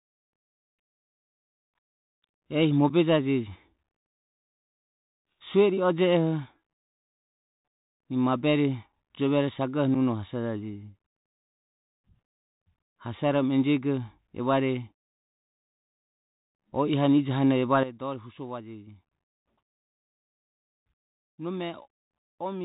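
From the very start the speech has that Bluetooth CVSD headset codec sound: nothing above 4 kHz, s sounds scratchy, a grainy hiss underneath, and loud bright bits distorting where the one-bit adaptive step can't keep up. That fits a 64 kbps narrowband headset link.

At 2.9 s, 8.93 s and 9.95 s you get unconcealed Bluetooth headset packet loss. Each time a voice packet, about 7.5 ms or roughly one packet's worth, drops out and nothing fills the gap, so there's a tiny hard-edged hole.

Right after "hane ijohane", at 17.83 s, there's a sudden gain jump. The speech and the background noise both drop by about 12 dB at once and stay down to the end. That points to a digital gain step likely applied without any ramp.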